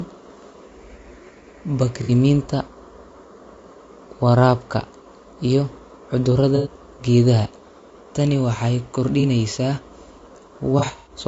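Throughout, the speech sounds rough and grainy, with noise filling the gaps between harmonics and a thin, synthetic top band. This is likely low-delay AAC compression (AAC-ELD), whose short frames resolve pitch poorly, and the damage fits a low bitrate near 32 kbps.

AAC frame loss with concealment follows at 2.03 s (60 ms), 6.56 s (90 ms) and 9.20 s (30 ms). Each gap is patched from the last good spectrum and heard as a smeared, noisy blur. From 10.79 to 11.12 s, 150 ms of losses spread over 270 ms, with the longest run near 100 ms, give a longer phasey smear.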